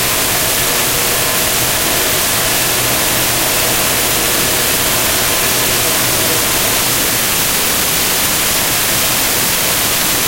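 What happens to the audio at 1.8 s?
Nothing goes wrong at 1.8 s; the sound plays through that moment intact, with no dropout, click or distortion.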